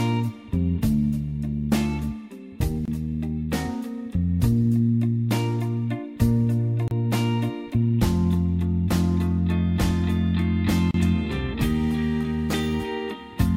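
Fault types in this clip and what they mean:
gap at a join of encoded pieces: separately encoded segments were joined untrimmed, so encoder start delay and last-frame padding remain as silence. Here short dropouts of about 25 to 32 ms open at 2.85, 6.88 and 10.91 s, every 4 s, with smeared edges before the sound resumes.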